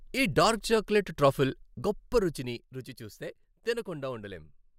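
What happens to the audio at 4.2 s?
At 4.2 s the speech plays through intact, with no dropout, distortion or level jump.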